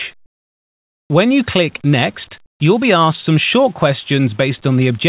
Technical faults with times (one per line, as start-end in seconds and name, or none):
0.26-1.10 comfort noise in place of the background